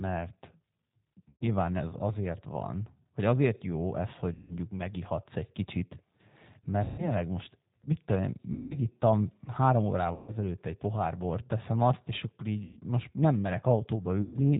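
The G.729 codec at 8 kbit/s shapes the whole speech recording. It rebuilds each 10 ms frame from a vocal tract filter, a pitch predictor and a handful of pulses, and nothing above 4 kHz survives. The result is plainly audible: the speech is band-limited and dull, with a rough, slightly synthetic texture where the sparse pulse excitation replaces the natural waveform.

VoIP packet loss concealed by the speech codec interrupts it seven times: 1.29 to 1.47 s, 4.33 to 4.55 s, 6.84 to 7.13 s, 8.53 to 8.77 s, 10.14 to 10.34 s, 12.65 to 12.81 s and 14.22 to 14.39 s. Each gap lasts between 120 and 180 ms, consistent with runs of six to nine consecutive 20 ms packets going missing. The decoder fills each gap by repeating its last pitch and filter at falling gain. That produces a stretched, buzzy tone or coloured noise that fades out, followed by weak, smeared speech for a short while after packets resume.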